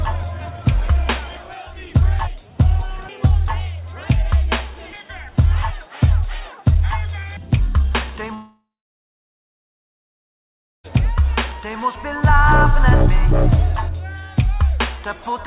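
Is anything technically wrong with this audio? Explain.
Yes. From 8.34 to 10.86 s there is a long network dropout. About 2.5 s of audio likely never arrived. The receiver stretched the last sound into a fading buzz or hiss. Then about 2.2 s of silence follows before audio resumes, the lost part gone.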